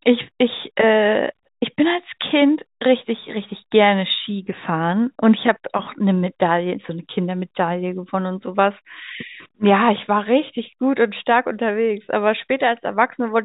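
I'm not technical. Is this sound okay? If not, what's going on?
Yes, this sound is okay, with nothing going wrong anywhere in it.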